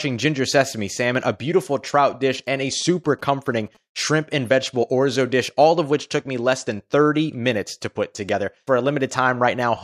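From 2.34 to 3.77 s, GSM signalling bursts from a nearby 2G phone are rectified into a galloping dit-dit-dit of short 217 Hz buzzes, clustered rather than steady like hum.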